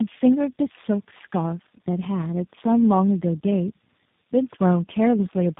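From start to finish the speech sounds rough, muffled and warbly, with nothing above about 3.8 kHz. That is tandem speech coding. The call evidently crossed several links, each decoding and re-encoding with its own speech codec, so every coder worked on the previous one's already damaged output. The layered artefacts point to around three such codecs in a row, ending in something like G.729A at 8 kbit/s.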